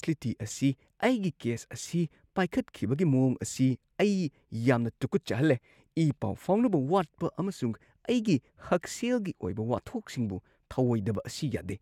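Nothing stood out on listening to this speech recording.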